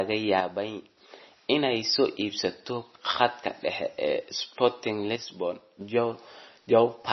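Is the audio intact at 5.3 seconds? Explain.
No. From 5.16 to 5.81 s one channel drops out, likely a lost stereo channel, so the mono sum falls abruptly by about 6 dB and is otherwise unchanged. Throughout, and so also at this moment, heavy MP3 compression is the likely cause of the dull, watery sound: nothing is left above 5.9 kHz, consistent with a bitrate around 24 kbps.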